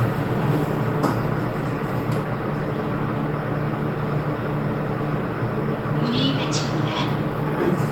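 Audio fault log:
No faults detected in this recording of sounds; nothing to log.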